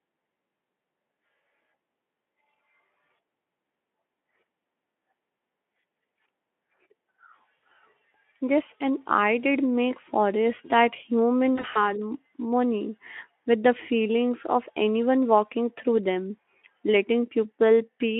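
At 7.57 s a single gap of about 20 ms is bridged by VoIP packet loss concealment in the Speex speech codec, heard as a brief buzzy or noisy smear. After "make forest that human", from 11.55 to 11.93 s, the losses total about 100 ms across a 200 ms stretch, with the longest run at 40 ms. This fits several lost 20 ms frames. The decoder extends its last pitch and filter with falling gain, so the sound turns buzzy or noisy and weak. It stays thin briefly after packets resume, over the narrow 200 to 3400 Hz telephone band.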